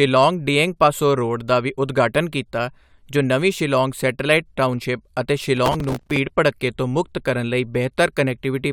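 From 5.58 to 6.17 s, right after "ਸ਼ਿਲੌਂਗ ਸੈਟੇਲਾਈਟ ਟਾਊਨਸ਼ਿਪ ਅਤੇ" and before "ਭੜੱਕੇ ਤੋਂ ਮੁਕਤ ਕਰਨ", there's processor overload crackle: around thirty tiny buffers of just a few milliseconds each missed their deadlines, each replaced by stale audio, giving a gritty tearing over the speech.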